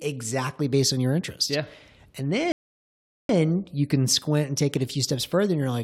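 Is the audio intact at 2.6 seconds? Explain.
No. A rebuffering stall runs from 2.52 to 3.29 s. The player exhausted its downloaded audio and paused until more arrived, so the speech drops to silence for about 0.77 s, then resumes exactly where it stopped, at "you can squint and".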